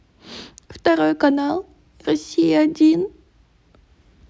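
Nothing in the recording stood out as a technical problem on listening.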